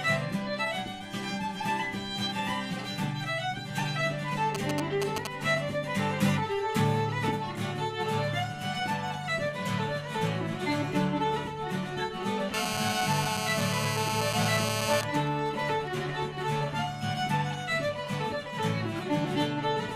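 From 4.5 to 5.3 s, a galloping dit-dit-dit of short 217 Hz buzzes, about as loud as the audio: GSM signalling bursts, a nearby 2G phone's radio pulses rectified by the audio circuit.

From 12.54 to 15.01 s, a hard, raspy 217 Hz buzz rich in harmonics sits about 2 dB below the audio. This is GSM phone buzz from a phone in a call, its steady bursts rectified.

From 15.03 to 15.97 s, the buzz gives way to even ticks with a longer buzz twice a second, well below the audio. These are GSM signalling bursts again, as the phone's user falls silent in the call.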